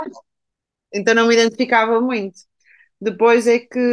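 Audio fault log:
No technical faults can be heard anywhere in the speech signal.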